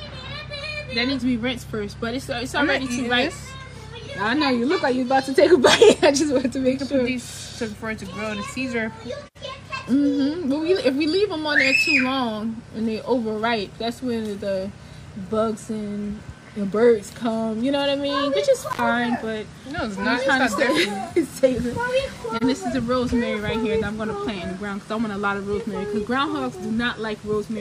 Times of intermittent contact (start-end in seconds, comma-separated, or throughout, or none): 18.69-18.80